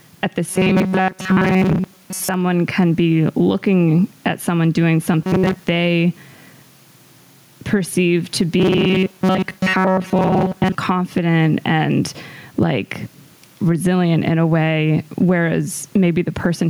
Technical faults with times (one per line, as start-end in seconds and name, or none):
0.00-16.69 gain pumping
0.49-2.34 robotic sound from repeated short buffers
5.23-5.64 robotic sound from repeated short buffers
8.58-10.75 robotic sound from repeated short buffers